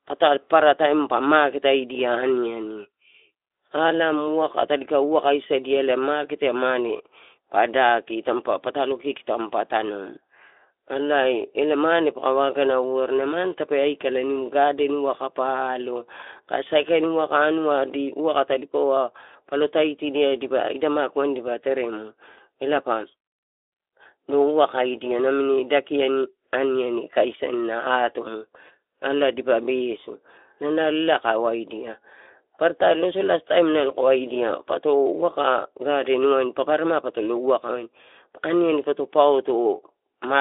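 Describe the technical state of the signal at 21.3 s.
At 21.3 s the audio is intact: the speech comes through a Speex codec path working normally, band-limited to roughly 300 Hz to 3.6 kHz with nothing above 3.8 kHz, and only light coding damage.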